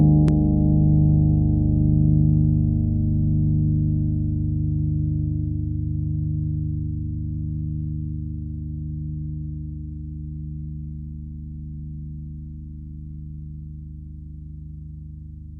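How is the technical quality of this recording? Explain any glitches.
Nothing here needs explaining, since the recording runs without a single glitch or interruption anywhere along the way.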